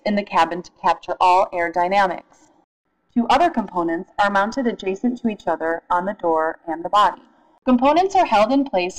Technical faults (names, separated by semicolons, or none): none